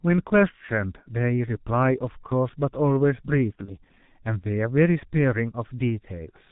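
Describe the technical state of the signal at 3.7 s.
Between 3.66 and 3.74 s the speech thins into a brief buzzy, fading smear, then stays weak. This is VoIP packet loss concealed by the speech codec, which fits a single lost 30 ms frame: the decoder extrapolates from its last pitch and filter, fades the gain, and takes a moment to recover. Throughout, the speech is muffled and hoarse with blurred consonants, heavy G.723.1 codec damage from a narrowband, slow-updating voice model at a rate that fits about 6.3 kbit/s.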